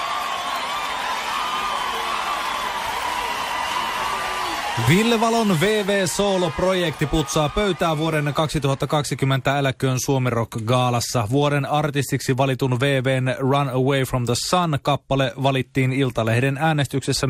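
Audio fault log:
throughout: MP2 compression, likely the cause of the dull, gurgling sound. Upper sub-bands flicker off and coarse quantisation leaves steady granular distortion, which fits a low rate near 80 kbps, unlike sudden burbles.
16.6 s: DAB burbling, a brief blip of noise where a few bit errors slipped past error correction and corrupted samples in single sub-bands, a momentary disturbance rather than the constant dullness of compression.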